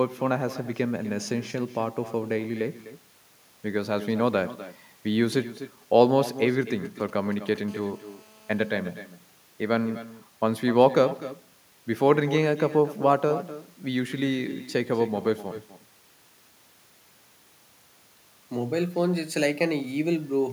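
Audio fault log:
throughout, echo with no canceller: every phrase is shadowed by a quieter, thinner copy about 15 dB down, arriving roughly a third of a second later, the far end's loudspeaker feeding its microphone.
6.62–7.58 s, GSM signalling bursts: a galloping dit-dit-dit of short 217 Hz buzzes, faint at roughly 25 dB below the speech, from a nearby 2G phone's intermittent radio bursts rectified by the audio circuit.
7.68–8.71 s, GSM phone buzz: a hard, raspy, harmonic-rich 217 Hz buzz about 30 dB below the speech, from a nearby 2G phone transmitting in bursts 217 times a second in a call, its bursts rectified.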